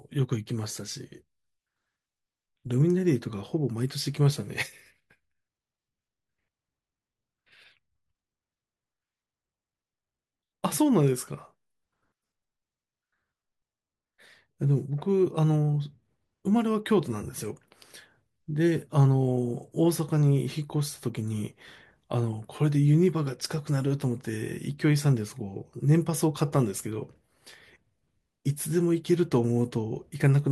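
No technical faults are audible.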